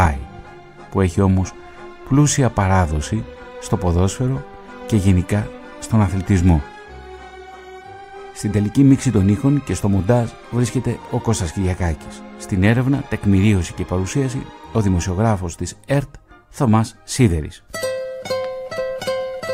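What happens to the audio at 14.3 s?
Nothing goes wrong at 14.3 s; the audio carries on intact through that moment.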